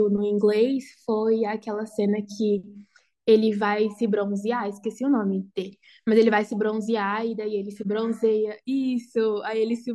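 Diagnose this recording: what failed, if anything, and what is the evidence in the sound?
Nothing in the recording points to a failure at any stage of the chain. The speech plays through with no event in the sound that would mark something going wrong.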